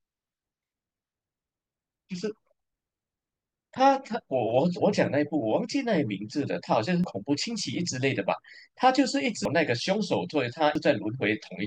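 At 7.04 s, 9.45 s and 10.75 s the speech jumps forward abruptly where compressed frames were skipped. Each gap points to whole 92.9 ms frames being lost, roughly three, five and two frames, so about 0.3, 0.5 and 0.2 s of audio vanish. On a waveform the envelope changes suddenly at each point, and a spectrogram shows the harmonic pattern cut off without any silent gap.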